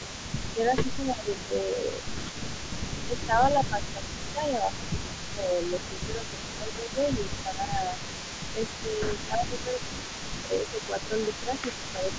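Speech in which the level repeatedly dips by about 5 to 10 dB at 0.0–0.07, 0.54–1.49, 3.06–7.97, 8.87–10.95 and 11.43–12.04 s, showing as sagging waveform envelopes and thinned spectrogram bands, likely speech suppressed in double talk. Throughout, a faint copy trails the speech by about 0.33 s at roughly 15 dB down, a shadowed repeat of spectrogram patterns that is likely echo leak from a loudspeaker endpoint.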